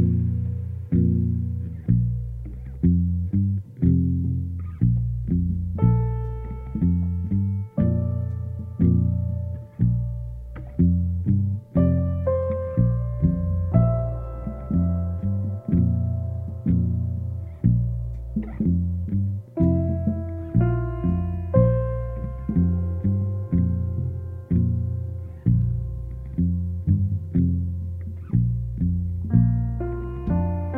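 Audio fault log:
Nothing wrong turned up in this one; the audio runs along without a single glitch worth logging.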